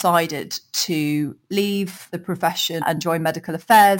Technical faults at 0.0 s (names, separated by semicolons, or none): imaging from sample-and-hold upsampling